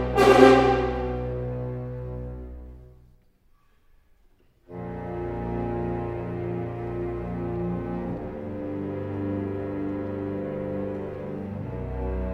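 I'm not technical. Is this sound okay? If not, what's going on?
Yes, it sounds fine; nothing wrong can be heard.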